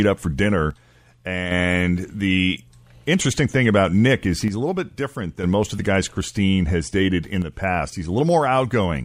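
Just after "up for", from 0.71 to 1.51 s, the speech level falls abruptly by about 6 dB, then jumps back before "the interesting thing about". The same drop returns from 4.48 to 5.44 s, ending before "most of the guys". A brief dip follows from 7.42 to 7.52 s, after "has dated in". The likely cause is one channel dropping out: one stereo side goes silent, so the mono sum loses half its shared signal.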